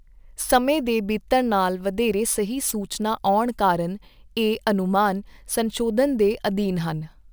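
Throughout the speech, a crude rate conversion repeats samples without filtering, consistent with 32 kHz stretched to 48 kHz. The periodic error lands roughly 20 dB below the speech, adding a gritty, inharmonic fizz that rides on loud and sibilant moments.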